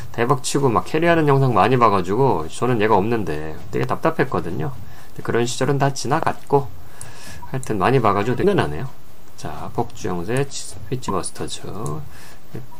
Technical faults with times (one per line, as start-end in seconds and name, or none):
3.83-3.86 loud pop
6.23-6.25 loud pop
8.41-8.44 broken MP3 bit reservoir
11.08-11.11 broken MP3 bit reservoir